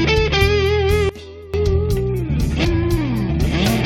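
At 1.09 s the level suddenly drops by about 19 dB, with the background falling in step, and stays down until 1.54 s. This is a sudden gain jump, likely a digital gain setting applied in a single sample step rather than ramped in.

At 2.64 s the sound jumps abruptly ahead and continues from a later point. This is a stream segment skipped, likely one segment of the stream failing to load so that the player moved straight on to the next one.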